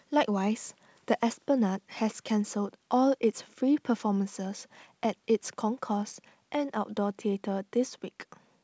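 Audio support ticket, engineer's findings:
No faults found in this speech recording.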